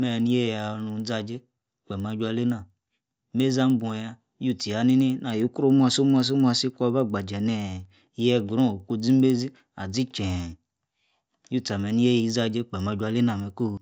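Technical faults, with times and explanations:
Throughout, resampler restarted on every block: a steady tick at 10 Hz rides under the speech, heard only while signal is present. It points to 100 ms blocks each converted from 16 kHz to 48 kHz in isolation, so every block edge lacks true neighbouring samples, unlike random codec glitches.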